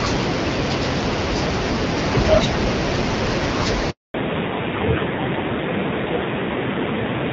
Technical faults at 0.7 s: none

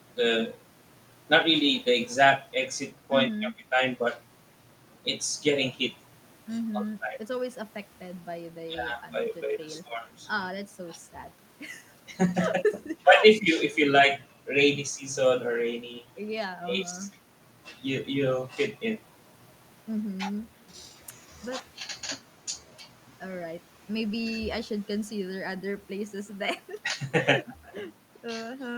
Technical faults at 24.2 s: none

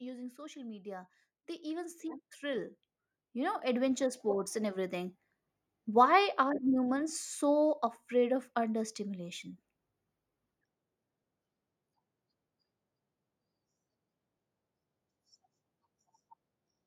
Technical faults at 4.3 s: automatic gain rising

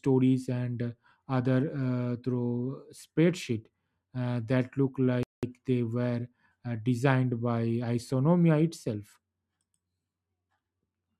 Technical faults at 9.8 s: none

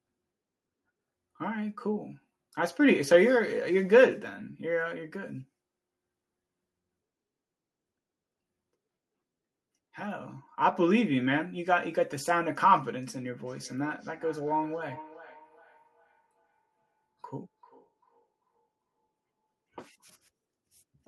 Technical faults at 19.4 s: feedback echo between two devices

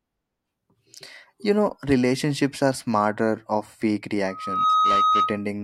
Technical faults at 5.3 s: loudspeaker feedback squeal

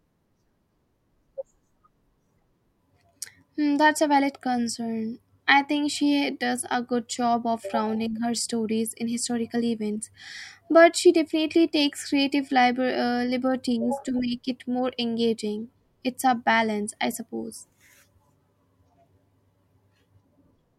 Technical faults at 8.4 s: wireless microphone noise hit

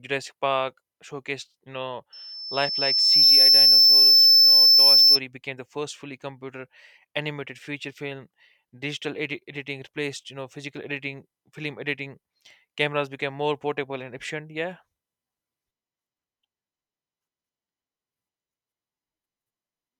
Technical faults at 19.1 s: none

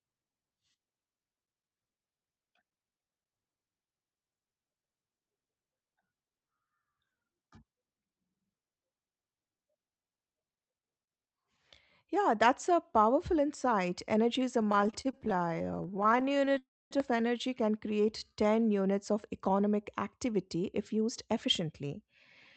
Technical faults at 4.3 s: none

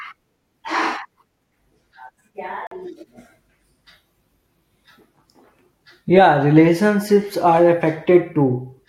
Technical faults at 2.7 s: Bluetooth stall

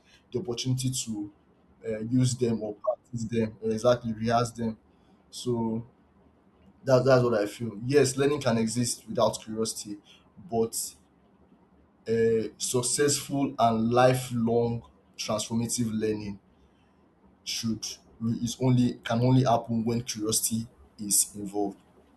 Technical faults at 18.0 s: none

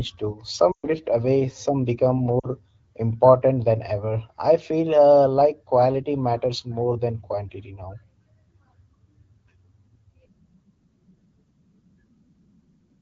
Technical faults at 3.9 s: none

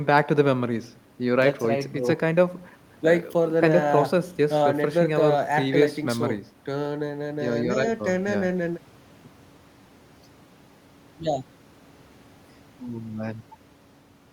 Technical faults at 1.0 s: none

